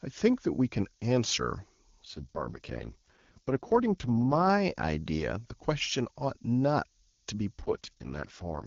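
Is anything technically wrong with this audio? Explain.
Yes. A steady, thin hiss runs through the whole speech clip, rising toward the top of the band. This is low bit depth with noise shaping: the quantisation error, only about 20 dB below the signal and consistent with 8-bit audio, has been pushed upward in frequency.

From 2.03 to 4.50 s and again from 7.59 to 8.66 s, the voice turns rough and synthetic without any gap or loss of bandwidth. This is an AMR rate drop, where the codec falls from its clean 23.85 kbit/s wideband rate to what sounds like about 6.6 kbit/s, leaving fewer bits for the speech.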